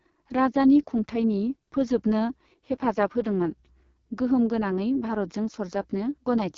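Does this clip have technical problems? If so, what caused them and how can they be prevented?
Yes: the whole speech clip sounds rough and raspy through AMR wideband (HD Voice) coding, nothing above 7 kHz, which fits the codec's lowest 6.6 kbit/s mode. Keep the call on 12.65 kbit/s or higher.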